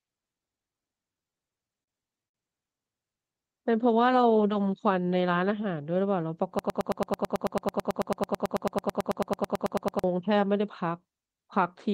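From 1.14 s to 2.35 s the speech hits repeated stalls, a stutter where the playback keeps catching on itself. Packets were arriving late or slower than they were being played, so the jitter buffer ran dry 11 times in that stretch. Each time the receiver held the last bit of sound to bridge the wait, about 198 ms of filler in all and up to 74 ms for the longest gap. Nothing is actually lost, but that sixth of the passage drags and hiccups.

Then from 6.59 s to 10.04 s there's a broken-record loop: a 110 ms fragment plays back to back 31 times, exactly the same each pass. It sounds like a stuck, repeating chop that runs for over three seconds. The likely cause is the player, encoder or stream stalling and resending the last fragment it held. Whatever should have played during those seconds is gone.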